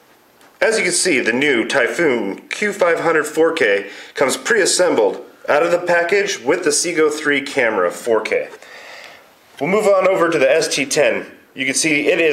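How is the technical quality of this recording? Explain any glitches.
There's one glitch. From 9.84 s to the end, the resampler restarts on every block: each 40 ms block gets converted separately, probably 48 kHz down to 44.1 kHz, so every edge picks up a small error, giving a steady 25 Hz ticking buzz under the sound.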